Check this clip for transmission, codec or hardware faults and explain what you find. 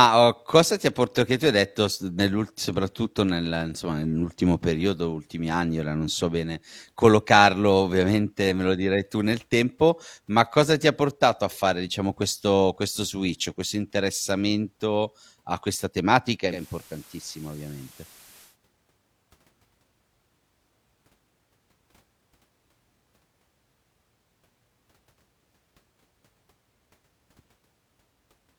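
There's one real fault here, a digital radio blending to analogue event in the speech from 16.47 to 18.57 s. The receiver lost its digital stream and cross-faded over about 155 ms to the station's FM signal, then came back. While it's on FM, the level sits about 4 dB lower and a bed of hiss comes up, roughly 20 dB under the speech.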